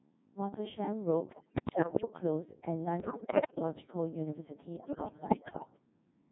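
Codec 2 vocoder, throughout: the speech has the robotic, buzzy character of a very low-rate digital-radio vocoder, consistent with a mode around 1.6 kbit/s. Only pitch, voicing, energy and a coarse spectral envelope survive. The decoder rebuilds the voice from sine waves rather than keeping the original waveform, so the damage is heavy. Everything sounds synthetic and reedy.

Bit errors on digital voice radio, from 1.33 to 2.1 s, 3.0 to 3.62 s and 4.76 to 5.7 s: in these bursts corrupted bits reach the vocoder. Each bit steers a whole frame's pitch, level, voicing or spectrum, so the voice lurches in pitch and loudness and breaks into bleeps, warbles and robotic gibberish. The error rate sounds to be around one bit in ten in the first burst, roughly double that in the second, and in between for the third.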